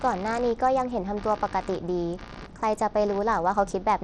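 From the first moment to the end, computer activity noise runs under the speech: a buzzing, scratchy pulse repeating at roughly 70 times a second, sitting roughly 20 dB below the voice. It comes from processor or graphics load disturbing the ground shared with the audio circuit. Unlike mains hum, which is a steady tone locked to the supply frequency, this pulse rises and falls with the computer's workload and ignores what the speaker is doing.

Across the whole clip the speech also carries plainly audible codec damage, most likely from Bluetooth SBC compression at a bit rate around 80 kbps. SBC splits the signal into a few wide bands and, when bits run short, starves the weak top bands and quantises the rest coarsely. The treble flickers in and out, and a gritty, aliased roughness clings to the voice. The flickering treble sets it apart from a simple low-pass filter, which would remove the top cleanly and steadily.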